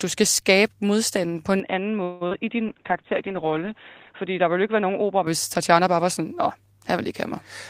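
Right after "skal skabe modstanden på", at 1.6 s, the sound turns dull and boxy with no gap at the change, and stays that way until 5.27 s. Nothing above 3.8 kHz survives, the level falls a few decibels and a faint new noise floor appears. This is most likely an input switched to a poorer device. The change in tone, level and background together separates it from a codec problem.

From 2.03 to 2.23 s the last sound is stretched into a fading buzz for 174 ms, with no silence. The stream then resumes where it stopped. This is likely a call audio freeze: delay is added but nothing is lost.

At 2.27 s, 40 ms of audio is missing and is papered over with a brief smear. This is short concealed packet loss. Unlike the freeze, this hole is real, and it is too short to build into a buzz.

From 2.67 to 4.21 s a call bitrate drop from 32 to 10 kbps leaves the audio rough and watery for about 1.46 s at its lowest. 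The coded band also narrows from 20 to 8 kHz, but the poorer input already caps the sound below that. What identifies this fault is the coarse, swirling coding texture, not extra dullness.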